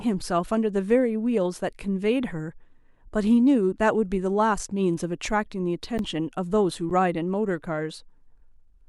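At 5.98 s the speech cuts out briefly. This is an underrun with held sample. The output buffer ran dry, and the converter froze on its last value. The waveform sits flat at that level for about 12 ms, which fits a 512-sample buffer. The sound stops almost without a click. About 10 ms of audio is lost. The same fault returns at 6.90 s, with the same length.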